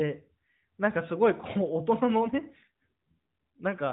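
From 2.22 s to 3.62 s there is an AMR rate drop. The speech turns rougher and more synthetic, with no gap and no change in band. That fits the codec stepping down from 12.2 to 5.9 kbps. The rate then recovers.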